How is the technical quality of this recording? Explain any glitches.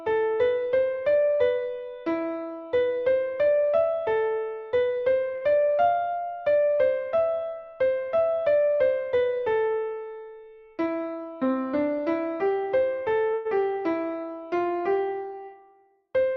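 The recording has three timing glitches from network delivery.

At 5.35 to 5.43 s, a sound is held about 58 ms too long, with a slight buzz or dip. This is a short stall from a late packet. The jitter buffer ran dry, the receiver stretched the last sound, and it resumed at the same point with nothing lost.

From 10.64 to 11.55 s, the audio runs at about 107% speed with unchanged pitch and sounds hurried. This is a jitter buffer speed-up. The buffer held too much audio, so the receiver repeatedly trimmed tiny pitch-period slices, roughly 70 ms in total.

At 13.34 to 13.47 s, the audio freezes: the last sound is continued as a fading buzz or hiss for about 112 ms, with no silence. This call audio freeze was likely caused by packets held up in transit. Playback then picks up where it stopped, losing nothing but adding delay.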